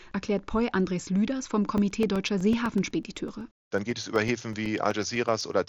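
From 1.78 s to 5.53 s, periodic USB or driver dropouts produce ticks every 0.125 s, each a gap of a couple of milliseconds filled with silence. Their strict even spacing, audible only under the speech through the mSBC headset path, separates them from random packet loss.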